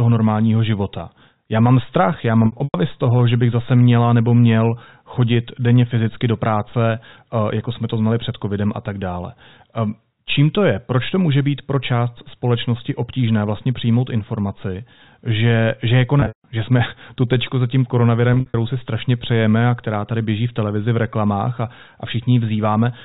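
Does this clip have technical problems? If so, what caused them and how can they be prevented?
Yes. Regular clicks run through the speech from about 0.4 s to 22.7 s, one every 2.79 s, roughly ten in all. They are most likely clock drift buffer slips: two devices on separate clocks disagreeing by something like 70 ppm, so a handful of samples is dropped or repeated each time the buffer runs over or under. The strict regularity and the single sharp tick set them apart from the packet losses, which smear over a longer stretch. Locking both devices to one clock, or adding adaptive resampling, prevents this.

Packet loss with pitch repetition occurs at 2.46 to 2.74 s, 16.2 to 16.44 s and 18.34 to 18.54 s. About 180, 200 and 120 ms of audio went missing in scattered gaps. The receiver filled each gap by looping the last pitch period, which gives a held, buzzy tone before it fades. The longest runs were 100 ms, 160 ms and 60 ms, and the 16.2 s event fades furthest toward silence before speech cross-fades back. 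These events differ from the drift clicks in being irregular, lasting well over a hundred milliseconds and having a buzzy texture. A jitter buffer with forward error correction or redundancy on the network path would reduce the losses.

The G.711 mu-law telephone coding at 64 kbps is the reason nothing above 4 kHz is heard.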